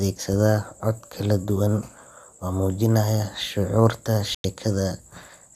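At 4.35 s the speech cuts abruptly to silence and comes back at 4.45 s, leaving a hole of roughly a tenth of a second with nothing in it. The surrounding sound doesn't stretch or blur to cover it. This is a digital broadcast dropout: the receiver stopped getting usable data, muted, and resumed once valid frames arrived. The gap's length fits about four lost frames, and whatever was transmitted during it is gone.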